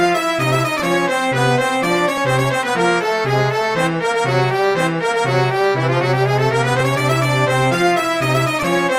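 At 0.79, 2.17, 6.80 and 8.62 s, compressed frames are skipped: the audio jumps forward by roughly 70 ms, but only about 40 ms at 6.80 s, which fits 10 ms frames. Each join shows as a vertical smudge on a spectrogram with a waveform discontinuity.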